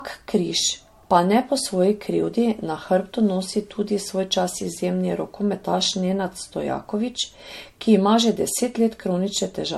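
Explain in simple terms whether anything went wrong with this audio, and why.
Something did go wrong: the speech was likely saved as an MP3, reopened and saved again about four times, a problem called generation loss. Each round adds new damage, so for the whole clip the voice sounds swirly, hollow and smeared, with crisp sounds blurred and the highest frequencies, above 16.5 kHz, missing.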